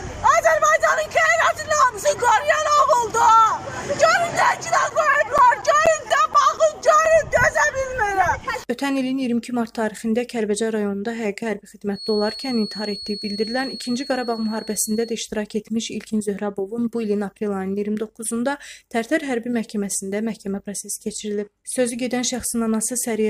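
From 4.42 to 7.53 s there is a run of CD scratch ticks: fourteen short clicks and micro-dropouts, roughly four to five per second, the longest only about 10 ms. The regular spacing points to a surface scratch passing the laser once per disc revolution, destroying more data than the error correction can rebuild. The player then has to interpolate or briefly mute the damaged samples, which produces the ticking.

Between 11.90 and 15.21 s a feedback whistle appears: a thin, steady tone at 4.3 kHz sitting roughly 15 dB below the main sound, swelling and fading slowly in level without building up. The likely cause is a loudspeaker-to-microphone loop held just at the edge of feedback, so a single frequency keeps ringing on its own while the loop gain stays just short of a runaway howl.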